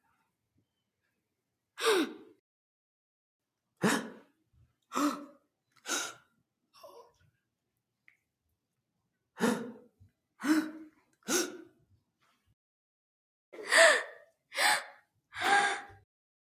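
Nothing in this recording of sounds stood out as a technical problem on listening.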